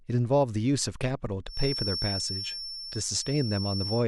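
A loudspeaker-to-microphone loop, likely sitting right at the edge of feedback, puts a feedback whistle into this speech clip from 1.44 s to the end: a thin, steady 5.4 kHz tone, around 10 dB below the speech, that rings on without building up and swells and fades slowly in level.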